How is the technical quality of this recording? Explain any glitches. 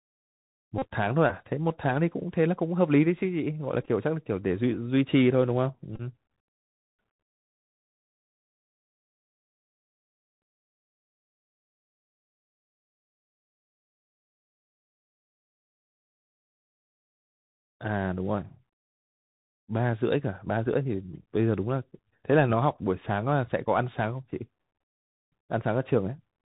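The recording is narrowband and audibly degraded throughout by a Bluetooth headset link, with three short packet-repeat glitches in the first six seconds.

The Bluetooth CVSD headset codec shapes the whole clip. The speech is confined to below 4 kHz, which sounds consistent with the 64 kbps CVSD voice path. CVSD sends one up-or-down bit per sample and adapts its step size. When loud, bright passages change faster than the step can follow, they distort. Sibilants come out scratchy, and a grainy hiss sits under the speech. The damage is plainly audible.

Bluetooth headset packet repeats occur at 0.78–0.86 s, 3.82–3.88 s and 5.96–6.01 s. When voice packets between headset and phone were lost, the decoder replayed the previous packet's bits. In the first event about 37.5 ms went missing in one block, which fits roughly ten 3.75 ms packets. Repeating every 3.75 ms, that block produces a steady buzz near 267 Hz. 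The second event lost about 26.2 ms and the third about 30.0 ms, each scattered across 37.5 ms. Their longest runs were roughly 7 ms and 20 ms, so they sound like a brief rough buzz broken up by ticks.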